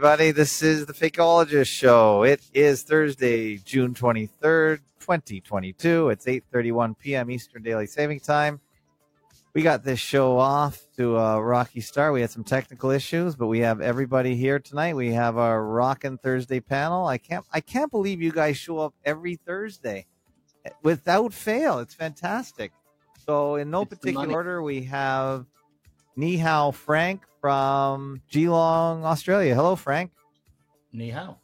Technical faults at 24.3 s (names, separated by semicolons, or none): compressed frames skipped